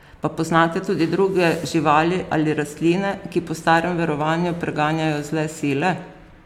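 No technical faults can be heard at any point in the recording.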